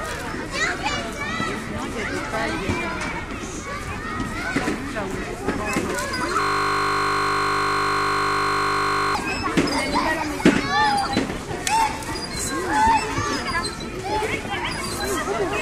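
At 6.41 s the sound locks into a system hang loop that lasts until 9.15 s. The system stalled while the audio hardware kept replaying the same 20 ms stretch of its buffer, repeating it about 137 times. Because the loop is so short, it comes across as a steady buzz at 50 Hz rather than a stutter. On a waveform the section shows one identical 20 ms shape tiled end to end. A spectrogram shows evenly spaced horizontal lines at multiples of 50 Hz.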